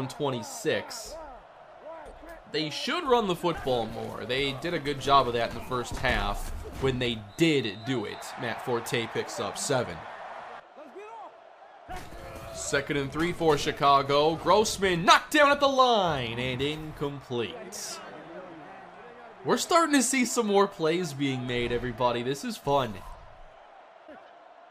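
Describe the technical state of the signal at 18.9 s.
Nothing at 18.9 s points to a fault: the signal runs on intact through that moment, with no interruption, distortion or other audible defect.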